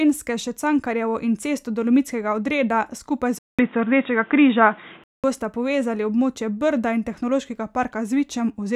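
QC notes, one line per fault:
3.39–5.24 s, input switched to a poorer device: after "odreda skupaj" the speech goes dull and boxy until "bosta povezali", most likely because the recording jumped to a narrower-band microphone or headset profile. On a spectrogram, everything above 3.8 kHz vanishes as if sliced off, with a fresh noise floor roughly 30 dB under the speech. The waveform shows a gap of about 200 ms at the switch and a level step of roughly 5 dB.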